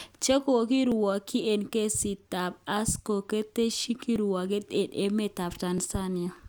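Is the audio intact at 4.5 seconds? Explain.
No. 4.5 s falls inside clock drift buffer slips from 0.92 to 5.78 s, with a click every 1.62 s, likely two mismatched clocks dropping or repeating small sample blocks.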